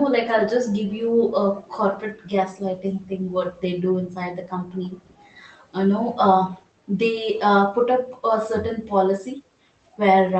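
From 4.72 to 5.42 s, a very faint copy of the speech trails the original by 325 ms. This is an echo leak, likely from a far-end loudspeaker whose echo canceller let residual pickup return. On a spectrogram it appears as weak, shifted harmonic traces inside the band-limited call audio.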